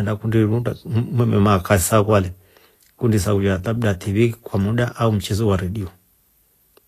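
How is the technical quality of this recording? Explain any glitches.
The recording has plainly audible lossy-codec damage throughout the speech, and it is most likely Vorbis compression.

Across the whole clip, nothing reaches above 14.2 kHz, and the treble below that ceiling sounds hissy and grainy. The encoder keeps a smooth outline of the spectrum but quantises the fine upper detail so coarsely that it turns into noise of similar energy, which fits a low bitrate around 37 kbps. On a spectrogram this shows as a hard flat cut at 14.2 kHz with speckled, smeared high bands and softened onsets.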